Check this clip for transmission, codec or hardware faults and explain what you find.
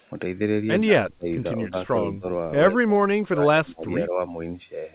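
The speech is repeatedly pulled down in level at four points, with the audio band ending near 4 kHz, consistent with a 64 kbps G.711 mu-law call path.

Speech suppressed in double talk, at 0.83–1.27 s, 1.58–2.25 s, 2.68–3.02 s and 3.20–4.20 s. The likely cause is an echo canceller confusing the talker with loudspeaker echo while both sides spoke. The speech ducks by about 30 dB, 10 dB, 25 dB and 25 dB in those spans.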